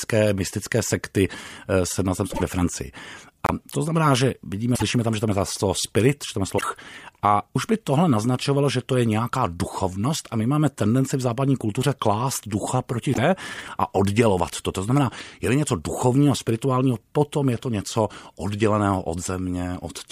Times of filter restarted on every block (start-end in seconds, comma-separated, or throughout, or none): none